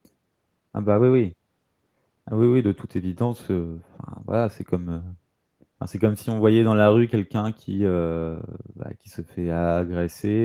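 No audible technical faults anywhere in the speech recording.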